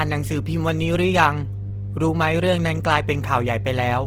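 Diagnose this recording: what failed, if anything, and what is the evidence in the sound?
At the analogue wiring stage, there is mains hum: a steady 50 Hz tone runs through the whole clip at a very high level, roughly as loud as the speech. A ground loop or nearby transformer is coupling the power line into the signal. A spectrogram would show an unbroken bright line at 50 Hz, and the waveform would show a continuous sine riding under everything.

At the codec stage, the speech sounds rough, grainy and noisy throughout, and the damage is plainly audible, although the bandwidth stays full up to about 20.4 kHz. This is likely Opus compression in its CELT music mode, at a rate that points to about 16 kbps. Short of bits, the encoder keeps each band's energy but fills the band with folded or noise content. On a spectrogram, energy reaches about 20.4 kHz with few holes, but the harmonic detail is speckled and smeared.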